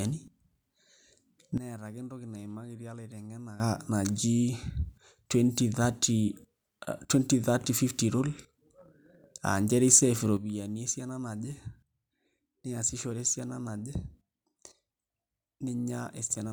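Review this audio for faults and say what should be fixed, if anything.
Sudden gain jumps at 1.58 s and 10.37 s: at 1.58 s the speech and its background noise drop together by about 14 dB in a single step, returning at 3.6 s, and at 10.37 s they fall by about 9 dB and stay down to the end. Because noise and voice move as one, the change is likely a digital gain setting applied instantly rather than ramped. Apply gain changes with a short ramp.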